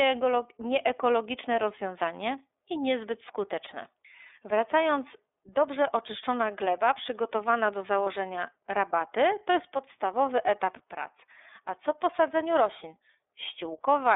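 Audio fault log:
throughout: iLBC codec. Everything sits in a telephone band of roughly 300 Hz to 3.6 kHz, and the speech comes out clearly rough and a bit synthetic. That's the codec rebuilding each frame's excitation on its own, and the texture fits the 13.33 kbps mode with 30 ms frames.
8.05–8.07 s: lost iLBC frames. Right after "oczyszczona gleba przygotowana do" there's a short held, faintly buzzy stretch, about the length of one 30 ms frame. The decoder filled the gap by repeating the last pitch cycle with some noise, and because each frame stands alone, the speech is back to normal by "rabaty to jest podstawowy".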